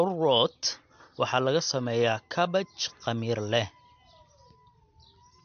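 Throughout the speech, nothing sounds above 6.5 kHz, and what remains has a watery, swirly texture with smeared consonant attacks. This points to MP3 compression, likely at a bitrate near 47 kbps. A plain low-pass filter would dull the top without this frame-to-frame warbling.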